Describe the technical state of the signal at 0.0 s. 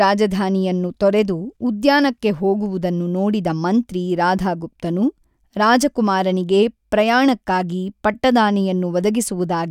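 At 0.0 s the speech signal is intact, with no audible fault at that moment.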